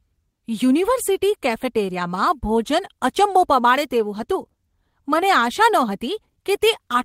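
From the first moment, the speech carries clock drift between sender and receiver: the sending side's audio clock runs about five percent fast, so samples arrive quicker than the receiver plays them out. Its jitter buffer keeps swelling and has to be trimmed to hold latency down. On a waveform this shows as no single event but a steady misalignment underneath: syllable envelopes come slightly too close together against any steady reference.

Those trims are heard as repeated timing corrections running from 0.02 s to 7.0 s, with playback effectively at 105 percent. The receiver keeps discarding short pieces, all in the same direction but at uneven spacing, so the speech has small hiccups and a faintly hurried, unsteady tempo. On a spectrogram, each cut leaves a thin vertical seam where harmonics jump slightly. In the waveform, periodic cycles meet a little out of phase at the splice.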